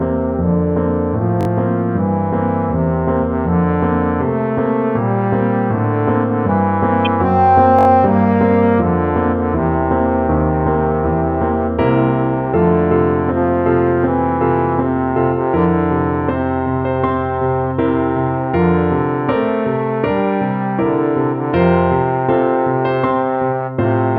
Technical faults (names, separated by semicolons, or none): repeated buffer; corrupt frame decoded